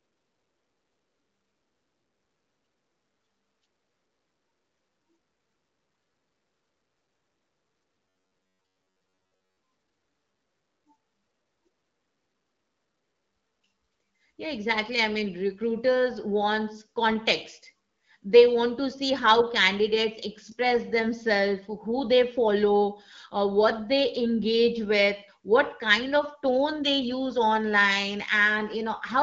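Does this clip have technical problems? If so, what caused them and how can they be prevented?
Yes. From 8.06 to 9.58 s the speech becomes a rigid metallic buzz at 93.8 Hz. This is robotic sound from repeated short buffers. Late audio was likely covered by replaying a slice of about 10.7 ms, skipping most of the real signal. A larger jitter buffer and steadier packet delivery would prevent it.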